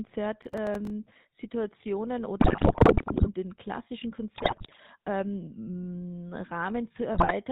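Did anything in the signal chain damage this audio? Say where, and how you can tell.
Yes. The whole clip has a buzzy, gravelly roughness and no content above 4 kHz, which fits the GSM full-rate codec at 13 kbps. At the codec stage, the voice is rebuilt from a vocal-tract model excited by sparse regular pulses, so the fine detail of real speech is replaced by that coarse texture.

From 0.42 to 0.90 s a gritty crackle tears across the speech. This is processor overload crackle at the driver or buffer stage: the processor repeatedly missed its deadlines, and each short block came out as silence. The hard-edged dropouts fit buffers of around 3 ms, roughly twenty in a row.

Squawks, pops and gargling break up the speech from 2.40 to 3.29 s, 4.34 to 4.77 s, and 7.14 to 7.32 s. These are GSM bit errors on the network link, at about 8%, 6% and 5%. Corrupted filter, pitch and gain values distort the spectrum and level frame by frame.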